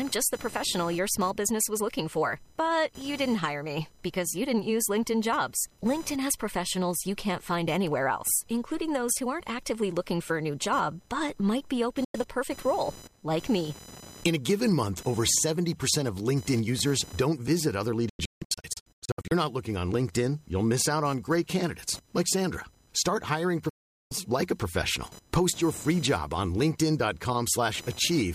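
Speech, with a faint computer activity noise buzzing at around 1 kHz well below the voice the whole way through, from processor or mouse load disturbing the shared audio ground. There are also digital broadcast dropouts where the receiver mutes on bad frames: a brief hole at 12.04 s after "but might be open," scattered holes from 18.09 to 19.32 s after "users don't visit other," and a gap from 23.69 to 24.12 s before "like a professional."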